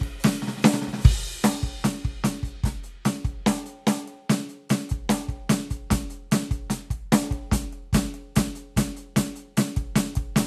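No technical faults are audible.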